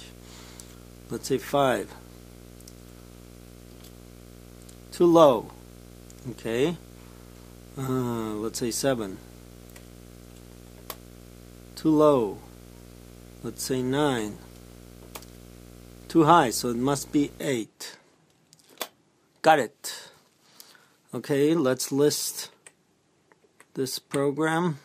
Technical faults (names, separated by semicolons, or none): video or display buzz